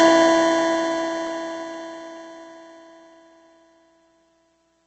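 Music with Opus compression throughout: nothing above 8.2 kHz, and tones sound grainy and rough rather than swirling as MP3 would, likely from a low bitrate near 16 kbps.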